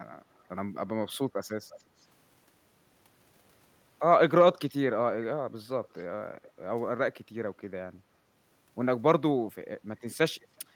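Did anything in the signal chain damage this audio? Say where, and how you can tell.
Yes. Faint, delayed copies of the speech trail the original at 0.34, 1.7, 1.99, 5.84, 6.43 and 10.41 s. Each lasts a tenth or two of a second, sits roughly 20 to 35 dB down, and lags by 334 to 369 ms. This is likely an echo leak from a far-end canceller in call processing. On a spectrogram, faint harmonic patterns repeat shifted right.

From 1.8 to 1.95 s, just after the strongest echo burst, the room sound dips by about 13 dB and then recovers. This is background gated by the echo canceller, also in call processing. The waveform's noise floor narrows briefly, and the spectrogram shows a short dark gap in the background.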